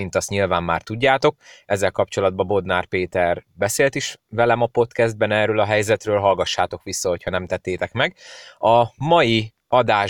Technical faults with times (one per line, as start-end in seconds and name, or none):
7.28 DC step